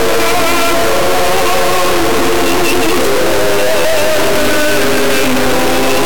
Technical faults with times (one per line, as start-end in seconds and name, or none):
0.00-6.06 integer read as float